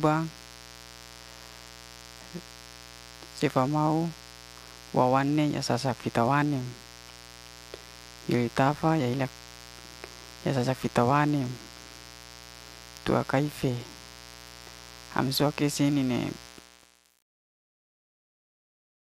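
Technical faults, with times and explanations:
Throughout: mains buzz. A steady, raspy buzz sits about 20 dB below the speech. It is built on a 60 Hz fundamental with a dense stack of harmonics reaching up into the kilohertz range. Sharp switching spikes, such as those from a dimmer, rectifier or poorly shielded line, repeat twice per mains cycle and cause it. The hard, edgy tone comes from those spikes. That separates it from a plain 60 Hz hum, which is a soft, low tone with few overtones.
16.47–19.05 s: truncation distortion on a fade. The quiet tail of the fade-out over the final seconds turns gritty as the level sinks. The fading stage kept too few bits and added no dither, which fits a 7-bit resolution. Near the smallest step, the waveform collapses into a few square steps. Clipping would break up the loudest parts. This distortion instead grows worse the quieter the sound gets.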